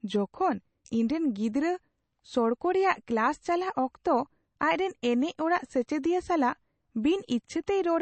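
Throughout the speech, the treble stops abruptly at about 8.3 kHz, and quiet detail flickers with a watery, swirling texture, with metallic chirps on s sounds. This is likely MP3 compression starved of bits, consistent with a rate near 32 kbps, dropping weak spectral lines frame by frame.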